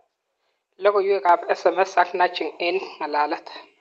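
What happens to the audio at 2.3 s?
At 2.31 s the microphone volume is stepped up. The call software judged the input too quiet and raised the device gain in a single step, about 2 dB. The speech and the background noise jump louder together, at the same instant.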